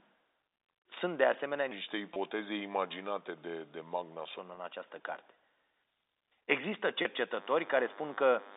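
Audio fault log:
1.71–4.39 s, section at the wrong speed: This stretch plays at 0.844 times its proper rate, so the sound is slowed and drops about three semitones, turning deeper and more drawn out than the audio on either side. The likely cause is playback against the wrong clock. On a spectrogram the harmonic stack and formants shift downward and stretch in time for this span, then snap back up at 4.39 s, where the waveform's syllable rhythm also quickens again.
2.14–2.16 s, 4.55–4.57 s, 7.02–7.05 s, packet loss with pitch repetition: Three short dropouts of 20 ms, 20 ms and 30 ms, sizes that fit two, two and three 10 ms packets. The receiver fills each one by repeating the last pitch period, so each sounds like a brief buzzy hold on the tone rather than a gap. The waveform shows repeated, fading cycles at each spot. On the spectrogram each appears as a short flat, perfectly steady harmonic patch.
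7.33–8.56 s, DECT cordless phone buzz: A thin, steady buzz comes in and runs to the end of the clip, about 25 dB below the signal. It comes from radio bursts arriving 100 times a second and being rectified in the audio path, which gives a 100 Hz fundamental with a dense comb of harmonics. The spectrogram shows evenly spaced horizontal lines at multiples of 100 Hz across the telephone band. The waveform carries a regular 10 ms ripple under the signal.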